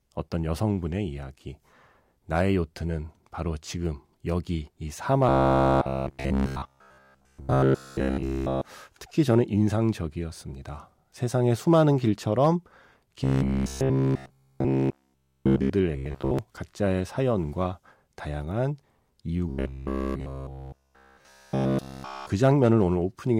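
Speech that turns into a rigid, metallic buzz at about 66.8 Hz, which is robotic sound from repeated short buffers, at 5.29–8.63 s, 13.24–15.71 s, 15.97–16.39 s (mostly) and 19.50–22.30 s. It is likely caused by a 15 ms buffer replaying while the real audio is skipped.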